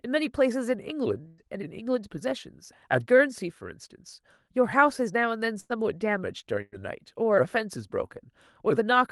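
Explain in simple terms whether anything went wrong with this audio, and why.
Three times, at 1.27–1.41 s, 5.60–5.72 s and 6.62–6.81 s, there is a burst of packet loss: a run of speech never arrived, so the receiver stretched the last sound into a fading buzz or hiss for about 100 ms, and then the speech jumps ahead, skipping about 60 ms.

From 1.82 to 2.32 s there is a jitter buffer speed-up: with too much speech waiting, tiny slices were cut repeatedly, removing about a twentieth of a second. The speech runs about 8% faster and sounds rushed, but the pitch stays the same and nothing is held or skipped outright.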